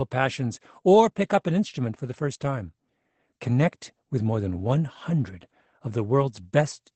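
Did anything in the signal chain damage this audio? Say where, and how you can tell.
Yes. Opus voice compression runs throughout, at the codec stage. Nothing sounds above 8.5 kHz, and the speech is plainly muffled and slightly hoarse, which fits Opus in wideband SILK mode at roughly 12 kbps, where the excitation is coded coarsely and the top band is dropped.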